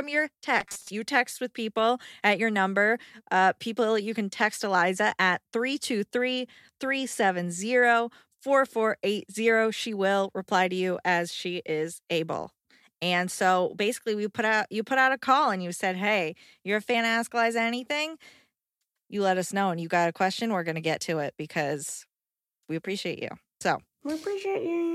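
From 0.60 to 0.90 s the speech collapses into a rigid, metallic buzz pitched at 200 Hz, the robotic sound from repeated short buffers. New audio likely arrived too seldom, so a 5 ms slice was looped to fill the gaps, with roughly half of this stretch made of repeats while the real audio was skipped. Unlike a plain dropout or stutter, the loop imposes a fixed buzz that still roughly tracks the syllables.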